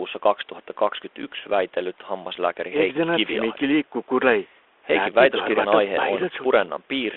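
No technical faults are audible.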